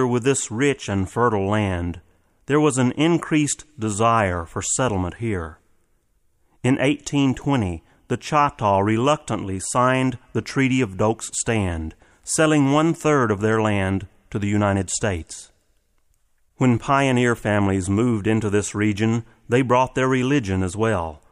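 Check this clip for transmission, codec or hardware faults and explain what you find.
Nothing in the speech points to a fault anywhere along the signal chain.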